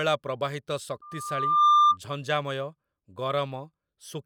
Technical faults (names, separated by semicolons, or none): loudspeaker feedback squeal